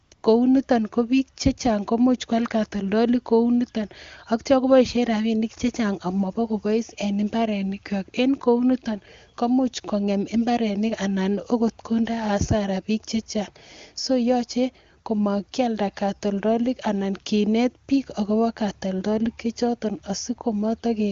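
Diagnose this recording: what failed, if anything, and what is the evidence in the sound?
Smooth, steady hiss replaces the background from 0.03 to 0.11 s and 0.13 to 0.23 s. This is AMR comfort noise: the codec's discontinuous transmission halted speech frames and synthesised filler.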